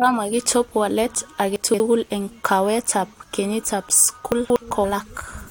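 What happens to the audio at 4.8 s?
At 4.83 s compressed frames are skipped: about seven frames of the 23.2 ms frame length, roughly 150 ms of sound, never play, so the audio lurches forward. The overlapping frames blend the join into a short smeared blip, with no silent gap as in a dropout and no hard click.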